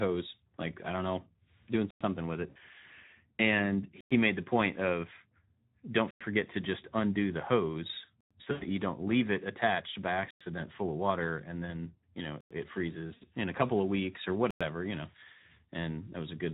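Throughout, the speech carries Speex codec damage: a hoarse, noisy graininess, which fits a low setting near 11 kbps. Unlike the intermittent faults, it never lets up, because the excitation is starved of bits in every frame.

The first gap between chunks comes at 1.91 s, then at 4.01, 6.11, 8.21, 10.31, 12.41 and 14.51 s. Each is a 100 ms hole of dead silence with hard edges, repeating every 2.1 s. That clockwork regularity and the abrupt, clean silence mark chunk joins, with no sound lost.

VoIP packet loss concealed by the speech codec strikes at 2.49–2.57 s, 8.51–8.67 s and 13.13–13.24 s, losing about 60, 100 and 80 ms. Instead of silence, the decoder stretches the last sound into a fading buzzy tone or coloured noise, and the voice stays weak briefly afterwards. The irregular timing also sets these apart from the chunk gaps.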